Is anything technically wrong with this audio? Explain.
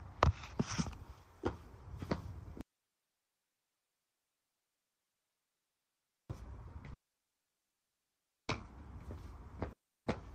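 Yes, there are three faults. From 2.61 to 6.30 s, an audio dropout to a faint residue leaves only hiss roughly 45 dB down. This is likely a broken signal path that stayed live, and it shows as an abrupt flat band of low noise on the waveform. From 6.93 to 8.50 s, a call audio freeze stretches the last sound into a fading buzz and then near-silence for 1.55 s. The likely cause is an emptied jitter buffer. The sound resumes with nothing lost, and a spectrogram shows a smeared, decaying tail. From 9.72 to 10.08 s, a long network dropout drops 0.34 s outright. It appears as a brief fading tail, then a silent gap, and the sound resumes later without the missing stretch.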